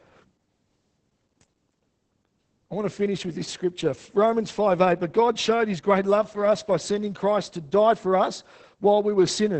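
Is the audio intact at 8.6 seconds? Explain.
No, 8.6 seconds sits inside a stretch of Opus voice compression that runs through the whole clip. The speech is coded with the SILK linear-prediction coder, which models the voice coarsely and stops at the wideband limit, so there's nothing above about 8.6 kHz. The damage is heavy, which fits a low bitrate around 10 kbps. At that moment the speech sounds muffled, a bit hoarse and slightly robotic.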